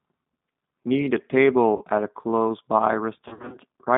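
Throughout, the speech carries the plainly audible texture of a G.729 codec: a slightly rough, synthetic quality, typical of a low-rate speech coder that rebuilds each 10 ms frame from a vocal tract filter, a pitch predictor and a handful of pulses rather than the waveform itself. The sound is consistent with G.729A at 8 kbit/s. The line band runs from about 200 Hz to 3.7 kHz, so there is no low end and nothing of the upper treble.

From 1.77 to 1.85 s there is VoIP packet loss concealed by the speech codec. About 40 ms of audio goes missing, which fits two 20 ms packets. The decoder carries its last pitch and filter forward at falling gain, and the gap is smoothed over with a brief, stretched sound. A longer episode follows from 3.28 to 3.57 s. Here about 160 ms is lost in pieces scattered over roughly 240 ms, with the longest run near 60 ms, pointing to around eight lost packets. Each gap is stretched into fading concealment sound, and because each frame builds on the damaged one before it, the sound stays weak and distorted between the gaps until the stream settles.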